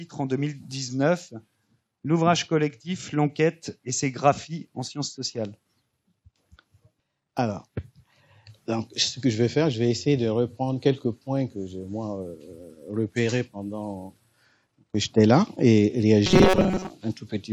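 From 16.27 to 16.91 s, robotic sound from repeated short buffers: a rigid 188 Hz buzz, likely from repeating a roughly 5 ms buffer, showing identical waveform cycles and flat spectrogram harmonics.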